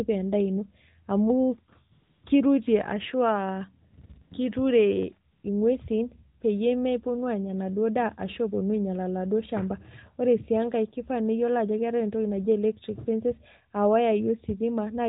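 AMR comfort noise first appears from 1.92 to 2.24 s, just before "kirutie ashu". The phone judged the talker silent and stopped sending speech frames. The receiver then filled the gap with synthetic noise. It sounds smooth and steady, unlike the real background. It returns in brief flickers at 3.92, 3.96 and 4.02 s, from 4.06 to 4.10 s, at 4.14 s, and from 4.22 to 4.32 s. It comes back once more from 5.32 to 5.44 s, before "inguesin peyie meponu aanya".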